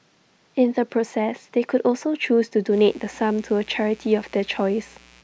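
From 2.69 s to the end, mains buzz enters under the speech: switching spikes from a 60 Hz supply leak in, giving a steady raspy buzz well below the voice.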